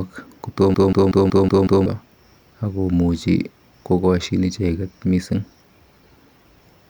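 A system hang loop from 0.74 to 1.86 s: the driver stalled while the hardware kept replaying its ring buffer, so one 186 ms fragment repeats six times at 5.38 Hz. It makes a machine-gun stutter that fits an 8192-sample buffer, with about a second of audio lost.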